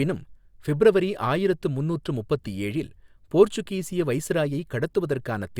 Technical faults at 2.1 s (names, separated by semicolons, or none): none